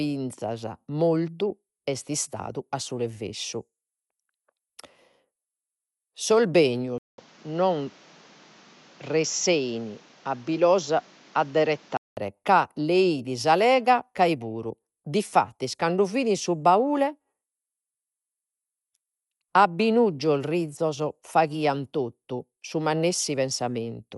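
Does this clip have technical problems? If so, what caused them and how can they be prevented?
Yes. Throughout the speech, nothing is heard above 11.4 kHz, and a rough, fluttering noise plainly clings to tones. This is likely Dolby Digital compression at a low bitrate, which fits about 64 kbps. The encoder drops the top band and fills bare lines with noise. Encode at a higher bitrate, or keep an uncompressed master.

From 6.98 to 12.17 s the sound turns dull, with nothing above 7.6 kHz. A 200 ms silence marks the switch. New background noise sits around 30 dB below the speech, though loudness barely changes. The input was likely switched to a poorer device. Lock the recording input so the system cannot change devices mid-take.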